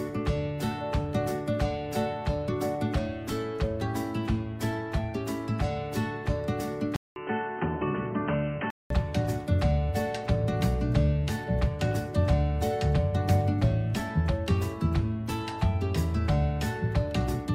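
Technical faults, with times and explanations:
6.96–8.90 s, input switched to a poorer device: after a 200 ms gap, sound turns quieter and dull, with nothing above 3.1 kHz and faint new background noise, likely a device change rather than filtering.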